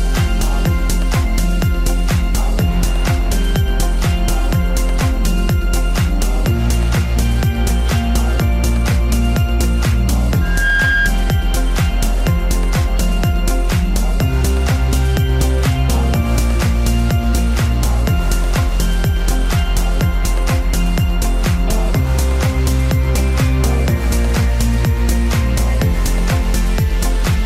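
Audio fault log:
10.41–11.14 s loudspeaker feedback squeal: a 1.6 kHz tone swells up within about a third of a second to roughly the sound's level, as the mic-speaker loop runs away.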